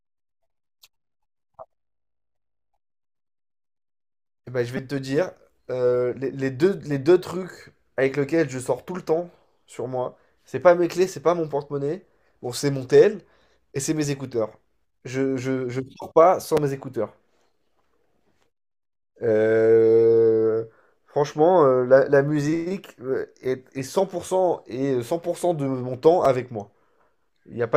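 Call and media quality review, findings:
Repeated buffer at 4.77 s, 16.57 s and 26.25 s. Short click or brief buzz in the speech. Output device starved; the last buffer replayed three extra times at 4.77 s, once at the others. Fits a 5 ms buffer. Roughly 15 ms skipped at first.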